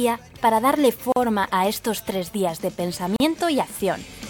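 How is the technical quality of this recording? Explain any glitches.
Two short silences break the recording at 1.12 to 1.16 s and 3.16 to 3.20 s, each about 40 ms and spaced 2 s apart. These are gaps at joins of encoded pieces: separately encoded segments were spliced untrimmed, leaving encoder delay and padding. Unlike a dropout, the sound resumes exactly where it stopped, with smeared edges.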